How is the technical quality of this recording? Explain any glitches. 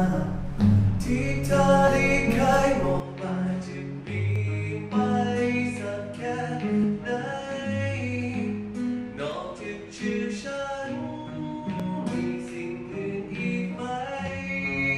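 The recording has two problems: repeated tiny skips and a drop in quality partway through.

Audio missing between chunks: brief skips of roughly 20 ms at 1.88, 4.36, 6.84 and 11.80 s, spaced in 2.5 s steps, likely lost as one recording chunk closes and the next opens.

Input switched to a poorer device: from 3.0 s the sound turns duller, with nothing above 10.5 kHz, about 10 dB quieter and a new noise floor about 40 dB down. There is no gap at the switch, which likely moved to another input.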